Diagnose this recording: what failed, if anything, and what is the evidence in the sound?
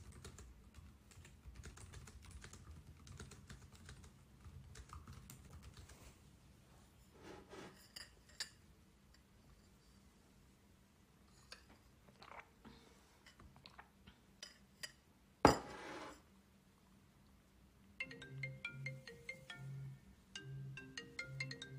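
The fault lies at the codec stage, where compressed frames were skipped during decoding. At 1.91 to 1.94 s and again at 20.76 to 20.78 s the sound jumps forward by about 20 ms, which fits a single frame of a codec using roughly 20 ms frames. A buffer underrun would instead insert silence or a hard discontinuity without losing any material.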